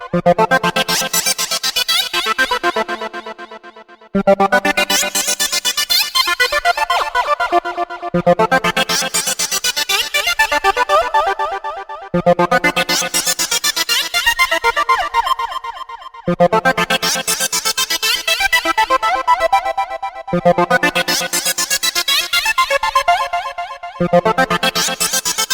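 Nothing in the audio points to a technical fault at any point.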